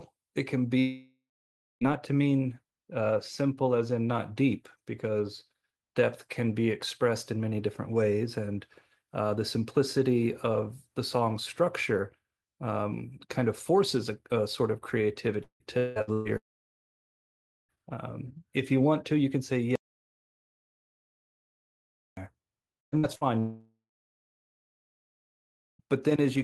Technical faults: long network dropout; repeated packet loss (robotic sound); audio dropout to silence

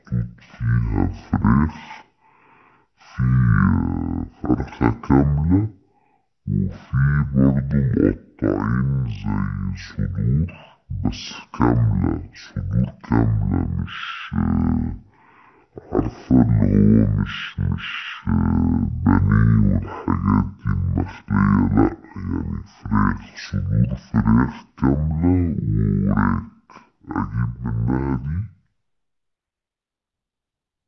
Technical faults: wrong sample rate

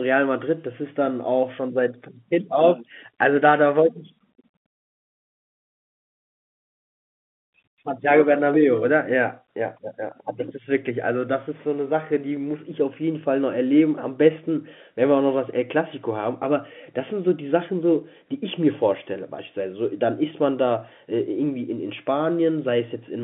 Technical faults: none

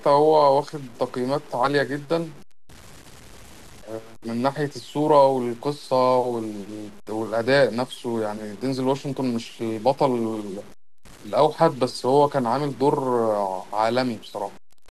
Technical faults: low bit depth without dither

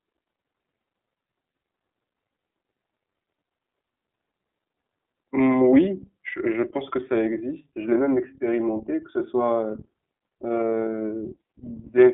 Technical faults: iLBC codec

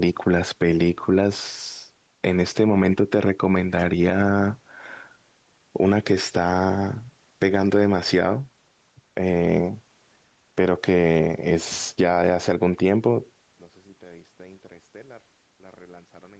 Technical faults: gain pumping; one channel inverted

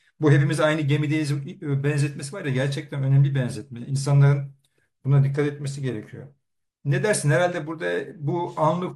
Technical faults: none

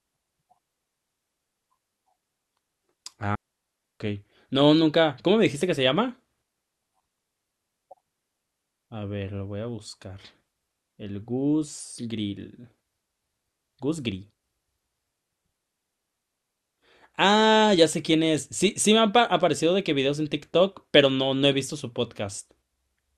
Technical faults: digital wireless dropout

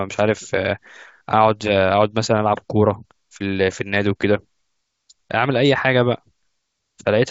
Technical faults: none

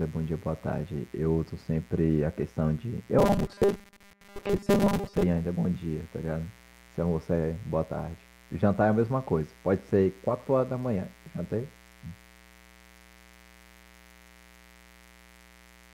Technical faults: mains buzz; robotic sound from repeated short buffers

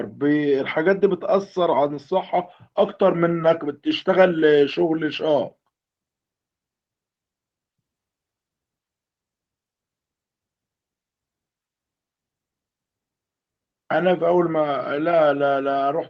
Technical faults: lost packet rebuilt from error correction

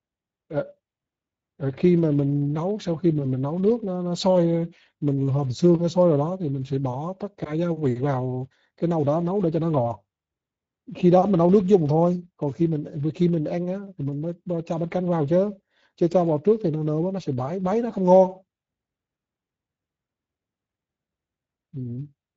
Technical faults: Speex codec

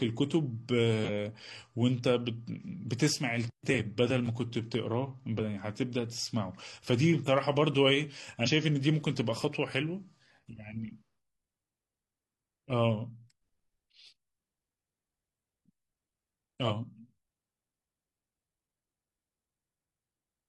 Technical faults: compressed frames skipped

